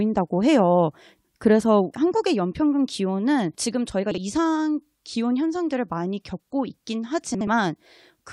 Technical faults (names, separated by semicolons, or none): frames out of order